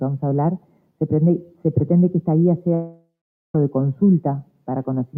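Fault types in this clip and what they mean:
noise suppressor applied to music or sounds: A speech-oriented noise suppressor stayed active on non-speech material, treating sustained content and ambience as noise. Throughout the clip the level swings by around 5 dB as held sound is pulled down, giving a pumping, thinned texture.
sound cut by the noise suppressor: At moments the suppressor judged the sound itself to be noise and attenuated it heavily. The level sinks by about 12 dB from 0.59 to 0.92 s, about 11 dB from 1.47 to 1.65 s, and about 12 dB from 4.43 to 4.68 s.
long network dropout: The audio stops being itself at 2.74 s and turns into a fading continuation of the last sound, then goes quiet for about 0.45 s before resuming at 3.55 s. The likely cause is a stream interruption that lost roughly 0.8 s of audio.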